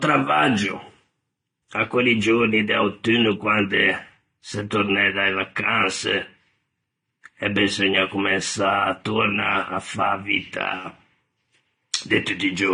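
Transcoding between lossy codecs runs throughout this speech. Nothing sounds above 9.6 kHz, and two layers of compression artefacts are heard together. The likely cause is a re-encode, with the sound pointing to Vorbis at 44 kbit/s followed by AAC-LC at 32 kbit/s.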